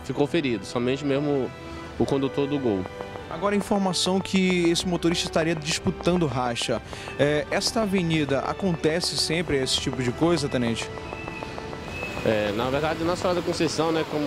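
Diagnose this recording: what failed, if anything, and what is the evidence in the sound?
A train of clicks runs from 2.86 s to 14.13 s: around seventy near-identical pops at a steady 6.66 per second, standing roughly 10 dB above the sound and ticking on through quiet gaps. That metronomic spacing and uniform shape separate it from random crackle or dropout glitches, which scatter unevenly and vary in form. The source is likely periodic interference coupling into the analogue wiring, or a faulty connection or power supply injecting the same pulse on each cycle.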